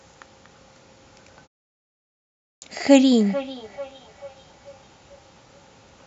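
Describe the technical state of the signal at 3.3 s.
At 3.3 s the speech carries a feedback echo between two devices, running from 3.14 s to the end of the clip. A second device in the same room replays this microphone's signal, the microphone picks it up again, and the echo canceller misses it because it only removes its own playback. Each syllable returns roughly 0.4 s later, at about 22 dB below the speech. A spectrogram shows faint copies of each burst offset at that interval. The waveform shows low-level echoes trailing each peak.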